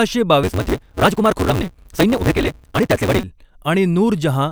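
From 0.43 to 3.24 s the speech races ahead at about 1.88 times normal speed with its timbre unchanged, under a steady 188 Hz buzz. This is a block size mismatch (truncated): blocks are written longer than they are read, which fits a 256-sample read, so each block's tail is discarded.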